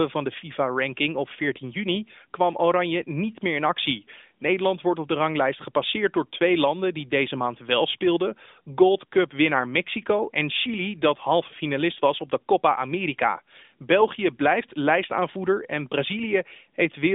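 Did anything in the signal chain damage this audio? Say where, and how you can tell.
No, nothing damaged this audio.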